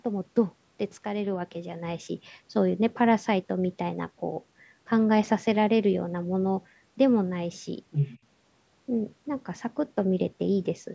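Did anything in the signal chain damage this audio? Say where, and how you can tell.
Yes. Between 7.91 and 8.19 s a second voice briefly comes through, the other side's voice leaking through, at roughly the same level as the talker. The damage sits in the call processing stage. The far end plays on the device's loudspeaker and reaches the microphone. The echo canceller most likely failed to subtract all of it for those 0.28 s. The audio's band stops at 8 kHz, which fits the call's microphone processing.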